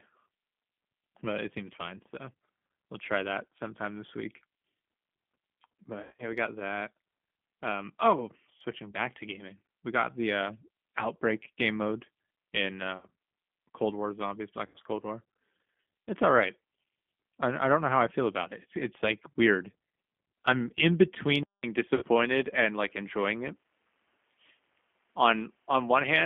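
Throughout, the speech sounds thin, slightly rough and synthetic, confined to roughly 200 Hz to 3.4 kHz with plainly audible coding damage. This is the G.729 codec at 8 kbit/s, rebuilding each 10 ms frame from a vocal tract filter, pitch predictor and a few pulses.

From 6.03 to 6.23 s the sound smears into a buzzy tone or coloured noise that fades, with 140 ms lost across 160 ms and the longest gap 80 ms. Shorter versions follow at 12.97 to 13.07 s (60 ms) and 14.66 to 14.76 s (80 ms). This is VoIP packet loss concealed by the speech codec: the decoder stretched its last pitch and filter while lowering the gain.

At 21.43 s a 200 ms silence precedes speech that runs at about the same level but is duller, losing everything above 3.8 kHz, with a faint new noise floor far beneath it. The likely cause is the input switched to a poorer device mid-recording, with the narrower band and the added noise coming from that device.

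From 21.95 to 22.04 s, 60 ms of further packet loss again briefly turns the sound into a fading tone or noise as the decoder extrapolates.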